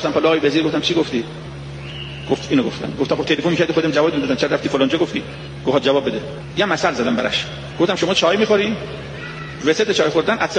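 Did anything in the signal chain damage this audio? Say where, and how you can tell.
No, nothing along the way seems to have harmed this one; I can't hear any point where the chain left a mark on the sound.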